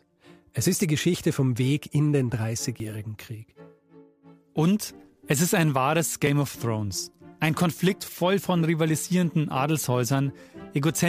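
At 2.8 s and 6.27 s the sound skips ahead about 10 ms with no silent gap, likely a dropped buffer (overrun), not a dropout.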